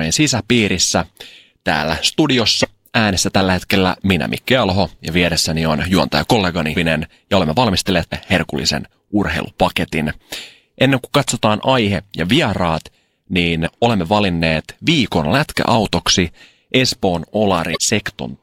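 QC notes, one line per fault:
8.09–8.13 s and 17.73–17.77 s, damaged data in a compressed stream. A brief glitch breaks in between "ja olemme valmistelleet" and "herkullisen urheilupaketin", and again near the end. Corrupt bytes make the decoder misread frames. It loses sync and hunts for the next valid header.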